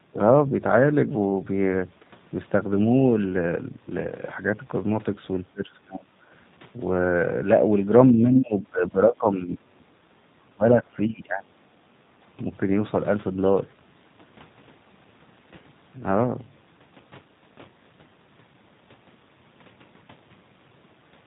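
G.729 codec damage runs through the whole speech recording and is plainly audible. Everything above 4 kHz is missing, and the voice has a rough, slightly synthetic edge. That character fits 8 kbit/s G.729A, which rebuilds each 10 ms frame from a vocal tract filter, a pitch predictor and a handful of pulses instead of carrying the waveform itself.

Speech suppressed in double talk first appears from 5.51 to 6.09 s. The voice collapses by roughly 30 dB for about half a second. It returns from 8.12 to 9.86 s, where the voice dips by around 20 dB in pieces, about a second and a half in all. It comes back once more from 10.44 to 11.55 s, with drops near 25 dB over roughly 0.7 s. The likely cause is an echo canceller that heard both parties at once, could not separate the talker from loudspeaker echo, and attenuated everything.

The other side's voice leaking through appears briefly, from 8.9 to 9.01 s, inside the second suppressed stretch. 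A faint scrap of a second voice sits about 25 dB below the main speech. It is likely loudspeaker sound that the echo canceller failed to remove from the microphone signal.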